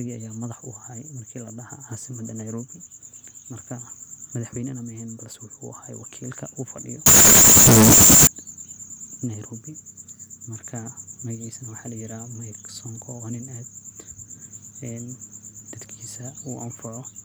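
From 7.06 to 8.27 s the speech turns into a blast of very loud, harsh distortion, with quiet moments as loud as the peaks. The likely cause is signed and unsigned mixed up: 16-bit samples read with the top bit flipped, so every zero crossing leaps across the whole range.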